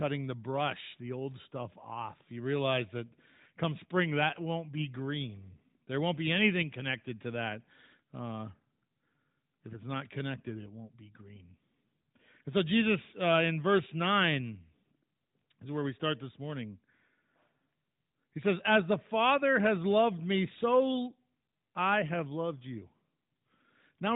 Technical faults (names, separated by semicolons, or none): none